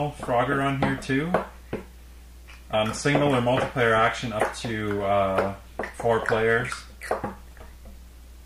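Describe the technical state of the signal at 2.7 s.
Compressed frames skipped at 2.73 s: a few whole frames of the encoded audio never reach playback, so the sound jumps forward by roughly 70 ms, which fits about three 24 ms frames. The join is heard as a sudden jump ahead in the audio.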